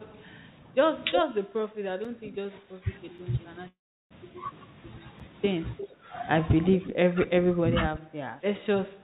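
It's a speech recording that came through a narrowband call path with nothing above 4 kHz, and it has a few faults. The first is speech suppressed in double talk from 0.11 to 2.89 s. Across roughly two seconds of that stretch, the level dips by about 15 dB, probably because the echo canceller couldn't separate the near talker from the far side talking over it and turned everything down. It happens again, more lightly, from 5.81 to 6.10 s at about 10 dB, and from 6.71 s to the end, where the dips go as deep as about 20 dB. There are also three blocks of digital silence at 2.05, 3.18 and 5.20 s. Each one is a 5 ms drop to silence with no fade, short enough to be heard as a tick or dip, the kind you get when the output buffer isn't filled in time. From 3.68 to 4.13 s there's a call audio freeze. The last sound is stretched to fill 426 ms and falls silent for about 360 ms of that, and then the speech picks up where it stopped with nothing lost, just pushed 426 ms later. 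Finally, there's echo leak from 5.78 to 5.95 s and again from 6.87 to 7.31 s. It's a copy of the speech about 355 ms late and around 15 dB down, likely coming back from a loudspeaker on the far end that its canceller didn't fully remove.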